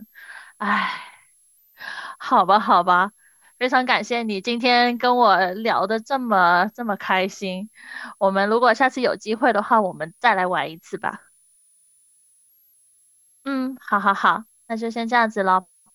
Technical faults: switching supply whistle

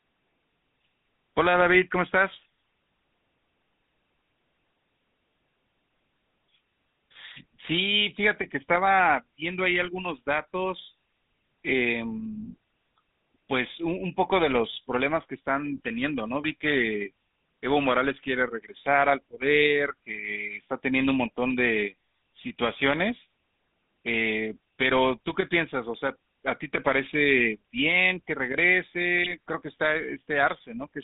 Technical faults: GSM full-rate codec; GSM bit errors

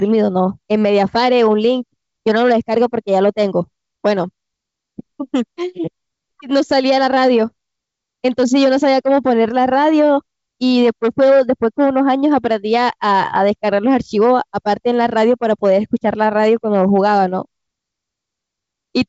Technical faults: none

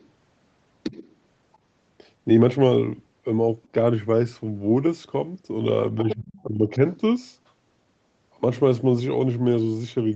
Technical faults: other side's voice leaking through; speech suppressed in double talk

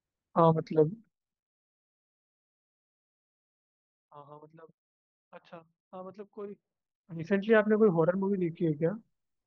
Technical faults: zipper noise

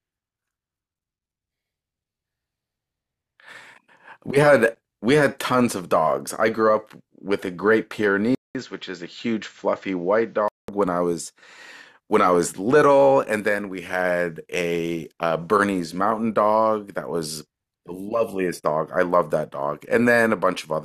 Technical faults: input switched to a poorer device

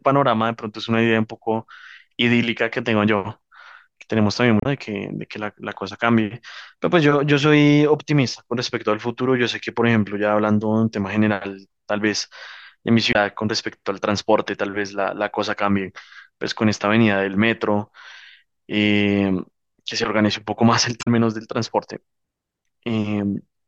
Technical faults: damaged data in a compressed stream

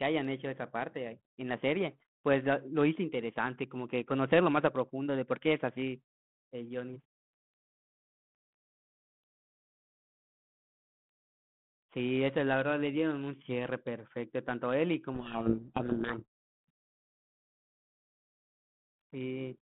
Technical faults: codec payload misread

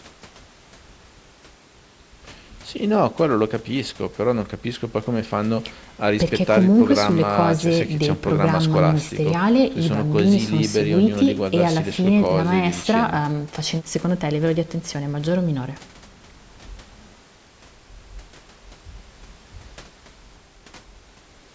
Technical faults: none

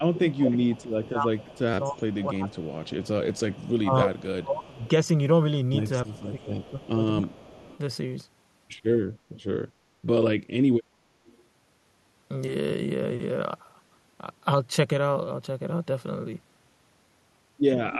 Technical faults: speech suppressed in double talk; echo leak; repeated buffer

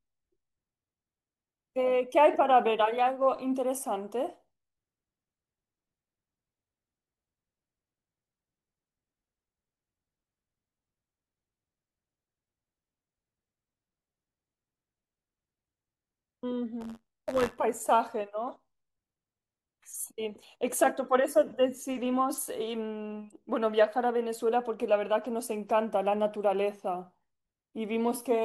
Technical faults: buffer tearing

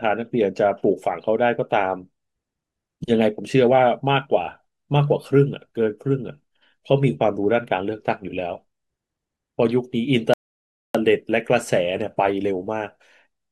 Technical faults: rebuffering stall

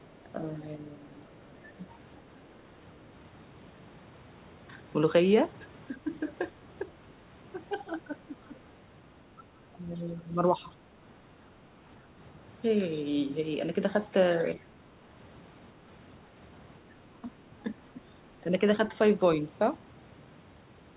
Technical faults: speech suppressed in double talk; other side's voice leaking through

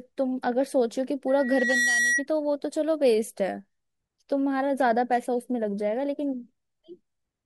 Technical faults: loudspeaker feedback squeal

